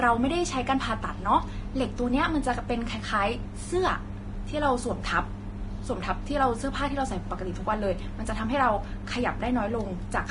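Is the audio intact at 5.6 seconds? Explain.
No, Vorbis compression is audible at 5.6 seconds, as it is across the whole clip. Nothing remains above 10.6 kHz, and the treble in this speech sounds hissy and grainy with smeared attacks. The likely cause is heavy coarse quantisation of detail over the spectral floor, which fits a low bitrate of about 30 kbps.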